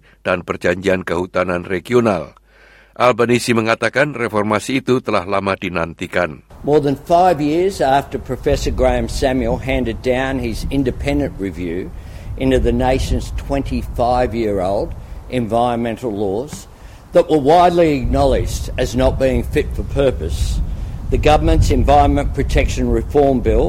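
No technical faults can be heard anywhere in this audio, and the signal stays continuous and stable throughout.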